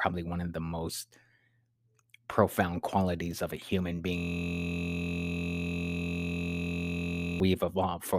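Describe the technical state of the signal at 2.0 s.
At 2.0 s the speech signal is intact, with no fault present at that moment.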